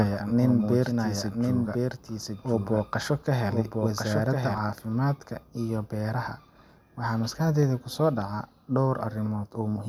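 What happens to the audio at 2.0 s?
At 2.0 s a doubled audio track is running, from the start to 4.58 s. A copy of the speech trails about a second behind, a few dB quieter. It is likely a second, slower capture.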